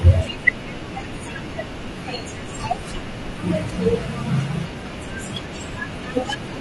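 Throughout the speech, the sound is rough and grainy, with a hiss-like noise filling the gaps between the pitch harmonics and a top band that sounds thinned and partly synthetic. This is likely low-delay AAC compression, the AAC-ELD kind used for video calls, and the damage level points to a bitrate around 32 kbps. Its very short frames blur the harmonic structure and spend bits inefficiently, so the encoder cannot keep the fine detail intact.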